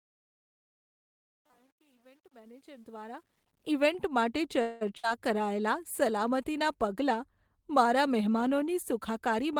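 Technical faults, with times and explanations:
0.0–3.72 s, truncation distortion on a fade: the smooth fade-in before "ઈવેન્ટ માટે" runs at an effective 10 bits without dither, so the quiet start, worst until 2.87 s, sounds gritty. The waveform shows staircase steps, and the spectrogram shows harmonic hash above the speech.
0.61–1.60 s, robotic sound from repeated short buffers: a rigid, metallic 100 Hz buzz rides on the speech. This is likely from 10 ms chunks repeated in place of about half the real audio. The spectrogram shows evenly spaced horizontal harmonics at 100 Hz intervals, and the waveform shows a visibly periodic, copied pattern.
4.61–4.83 s, call audio freeze: after "ઈવેન્ટ માટે", the last sound is held as a decaying sound for 195 ms. Speech then resumes at "કરાયેલાં સલામતીનાં" with nothing lost, likely because late packets emptied the jitter buffer. The spectrogram shows smeared, frozen bands, and the waveform shows a fading, repetitive stretch.
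4.97–5.05 s, burst of packet loss: shortly after the freeze and before "કરાયેલાં સલામતીનાં", 60 ms of speech is missing. It is replaced by 59 ms of held, fading sound. The spectrogram shows a brief static, blurred patch, then an abrupt jump where the formant tracks do not join.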